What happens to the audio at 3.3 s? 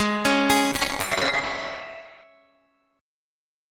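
At 3.3 s you're inside a call bitrate drop that starts around 0.73 s and runs to the end of the clip. The connection's bandwidth estimate fell, so the encoder was squeezed from 32 kbps down to 8 kbps, bottoming out for about 1.5 s. At the lower rates it codes everything coarsely and chops the top end from 20 kHz down to 8 kHz, so the sound comes across muffled, rough and watery.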